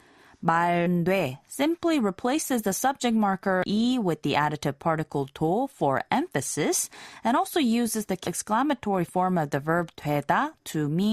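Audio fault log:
0.85 s, 3.63 s and 8.26 s: damaged data in a compressed stream. Each is a very short blip, a chirp, squawk, click or short hole lasting only one or two hundredths of a second. At these points the compressed data was corrupted, so the decoder misread or rejected those frames, lost sync, and searched for the next valid frame header before it resumed clean decoding.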